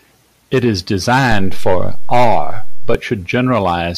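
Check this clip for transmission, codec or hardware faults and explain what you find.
One hardware fault is present in the speech. At 1.32 s a low thump marks a DC step, which lasts until 2.95 s. The waveform's zero line jumps by about -8 dBFS, as a recalibrating converter or a switched-in offset input would cause, and holds there while the speech continues unchanged.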